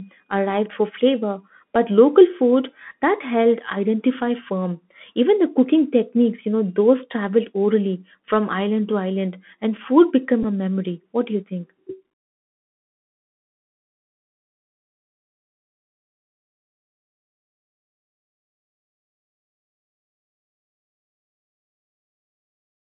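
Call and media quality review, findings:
Bluetooth CVSD headset codec, whole clip: band limited to roughly 200 Hz–3.5 kHz, nothing above. Granular hiss under speech, scratchy s sounds, slope distortion on loud high content. One-bit delta modulation with adaptive step, consistent with a 64 kbit/s CVSD link; damage plainly audible.

Bluetooth headset packet repeated, 10.43–10.45 s, between "island and food became" and "a memory": brief buzz, about 11.2 ms of audio replaced. Headset link dropped voice packets and the decoder replayed the last one; the gap fits three 3.75 ms packets, a short 267 Hz repeat.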